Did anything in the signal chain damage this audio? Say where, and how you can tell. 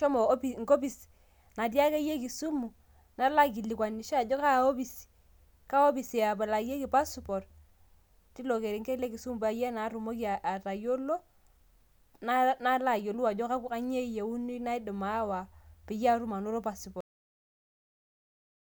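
Yes. Just after "peyie atum anoto", the speech stops mid-sound at 17.0 s and falls straight to digital silence with no decay through to the end. That is a cut-off end: the final buffers were never written out or played back.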